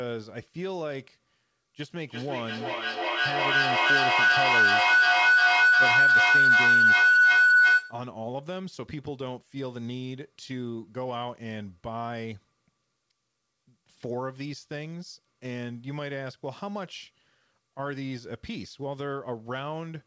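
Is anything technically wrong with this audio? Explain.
Yes. From 1.77 to 8.08 s there is a feedback howl: two devices in the same room on one call formed a loop that gained level each pass, so repeats spaced roughly 300 ms apart build into a tone near 1.5 kHz, peaking about 14 dB above the speech. The call path audibly tops out at 8 kHz, which fits a wideband call codec such as G.722.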